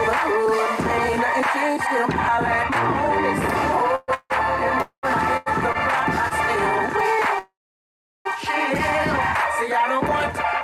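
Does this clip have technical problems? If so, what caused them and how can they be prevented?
Yes. Four call audio freezes occur, at 3.95 to 4.10 s, 4.14 to 4.32 s, 4.82 to 5.05 s and 7.39 to 8.27 s. Each time the last sound is carried on as a fading buzz or hiss and then drops to silence, briefly in the first (about 10 ms) but for roughly three quarters of a second in the last. The audio then resumes exactly where it stopped, so nothing is lost but the timeline is pushed back by 125, 160, 210 and 864 ms. The likely cause is packets held up in transit long enough that the receiver's jitter buffer emptied. A larger or adaptive jitter buffer, plus a more stable network path with fewer delay spikes, would prevent this.

Three short stalls from a late packet follow, at 5.37 to 5.48 s, 5.72 to 5.77 s and 6.29 to 6.33 s. In each, a sound is held on slightly too long with a slight buzz or dip, stretching by 91, 26 and 21 ms before the audio continues unchanged. 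A packet missed its playout time, the buffer ran dry, and the receiver stretched the last sound until it arrived. A little extra jitter-buffer headroom would absorb these late arrivals.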